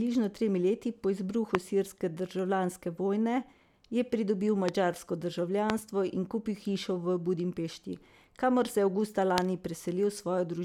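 Four loud pops cut through the speech at 1.55–1.57, 4.69–4.71, 5.70–5.72 and 9.38–9.40 s. Each is a single sharp click peaking roughly 20 to 25 dB above the speech, which continues underneath, likely from a voltage spike such as a switch, static discharge or driver glitch.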